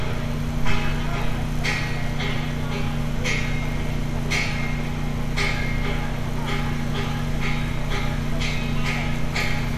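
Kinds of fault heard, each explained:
No fault of any kind can be heard here.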